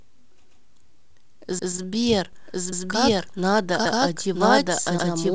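At 0.46 s the first overlapping-chunks join appears: the audio seems to be processed in pieces of about one second, each starting 132 ms before the previous one finished, so that stretch plays twice and the sound jumps back with a stutter. The same 132 ms repeat recurs at 1.59, 2.72, 3.86 and 4.99 s. Unlike a stall, nothing is stretched or held. An identical slice is replayed at a steady spacing of just over a second.

From 0.99 to 2.04 s the audio drags in repeated stalls (stutter). Packets arrived too slowly, and the jitter buffer ran dry about sixteen times. Each gap was bridged by continuing the last sound, with none longer than 13 ms. Together these fills add about 157 ms, roughly a sixth of that span, and no audio is lost. The result is a fine, dragging hesitation rather than a clean replayed block like the chunk joins.

From 2.33 s to the end a doubled audio track runs underneath. 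A second full-band copy, about as loud as the original and trailing it by roughly a second, switches in abruptly. It is likely a second, slower capture path. It has no decay or room colouring, which separates it from reverb or a natural echo. All of this sits within the G.722 call path's band, with nothing above 8 kHz.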